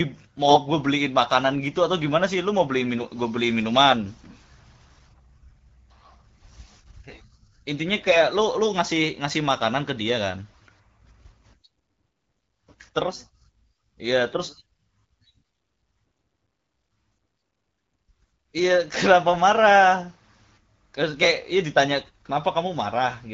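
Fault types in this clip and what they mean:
AMR bit errors: flipped low-protection bits in a few wideband frames briefly turn the speech hoarse and gargly, with pitch and level roughly held.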